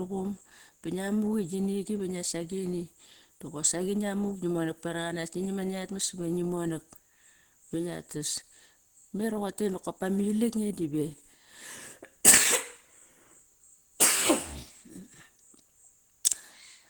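Throughout the speech there is plainly audible Opus compression damage, likely from a low bitrate around 16 kbps in hybrid mode. The voice sounds hoarse, rough and grainy, with noise filling the highs instead of MP3-style swirling gaps, while bandwidth reaches about 20.1 kHz.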